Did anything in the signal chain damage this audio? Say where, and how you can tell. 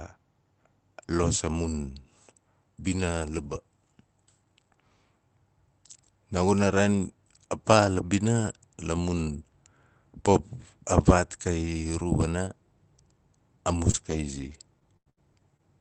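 Yes, on the network side: from 13.91 to 15.61 s, repeated packet loss (robotic sound) leaves five holes, the longest about 90 ms, which the receiver fills by stretching the last Opus audio forward. That concealment gives the speech a choppy, robotic quality with fragments missing.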